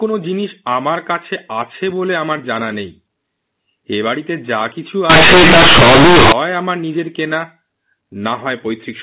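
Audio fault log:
5.10–6.32 s, companded audio read as linear: A-law bytes were played as plain 8-bit samples without expansion, so each sign change jumps across half the range, giving loud buzzy distortion and noise in pauses. The waveform becomes a dense, bent block where quiet sounds are as large as loud ones, with broadband noise filling the spectrogram.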